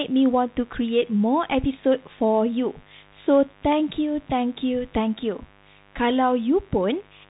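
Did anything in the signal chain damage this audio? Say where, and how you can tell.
Yes. In the analogue wiring, a steady, raspy mains buzz sits under the whole clip, roughly 30 dB below the speech. Its fundamental is 50 Hz, and sharp switching spikes twice per cycle spread harmonics well into the kilohertz range, which points to a dimmer, rectifier or unshielded run.

At the codec stage, a Bluetooth CVSD headset codec plainly damages the speech. Nothing passes above 3.8 kHz, s sounds are scratchy, and a granular hiss runs throughout. This fits a 64 kbps CVSD link, whose one-bit adaptive step can't keep up with loud high-frequency content.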